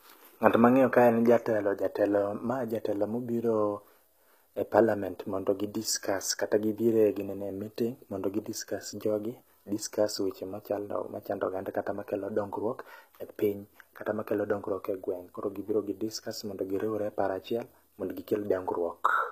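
Throughout the speech, the treble sounds bright but synthetic, with s sounds turning gritty, metallic and lispy. This is likely HE-AAC compression, at a rate that fits about 20 kbps: the upper band is rebuilt from copied lower bands, so its harmonics no longer match the original.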